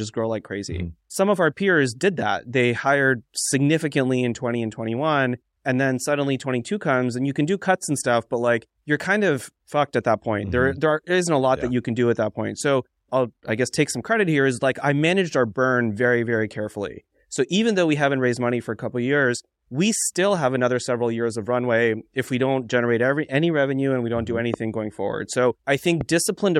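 Near the end of this speech clip there are two loud pops. The first hits at 24.54 to 24.56 s, right before "going forward", and peaks around 15 dB above the speech. The second, at 26.01 to 26.03 s, is a bit softer at roughly 10 dB over. Each is a single sharp click of about 20 ms, riding on top while the talking carries on underneath. The likely culprit is a voltage spike getting into the signal path, such as static or a switch or plug transient.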